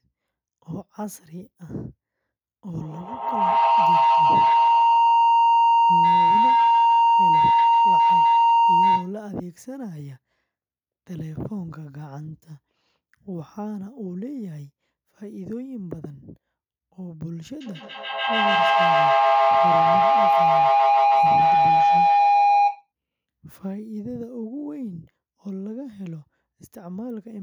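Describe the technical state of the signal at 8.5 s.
At 8.5 s you're right near the end of a feedback howl that runs from 2.77 to 9.2 s. Two devices in the same room are on the call, so each pass from microphone to loudspeaker and back comes out louder. The repeats, about every 150 ms, narrow to a tone somewhere around 1 kHz that peaks at about 14 dB above the speech, lasting until the loop breaks.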